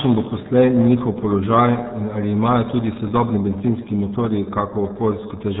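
From start to finish the speech carries RealAudio 14.4 codec damage: nothing passes above about 3.8 kHz, and heavy coarse coding leaves it muffled and gargly, which fits an 8 kbit/s rate. Unlike simple telephone band-limiting, the remaining band itself sounds churned and watery.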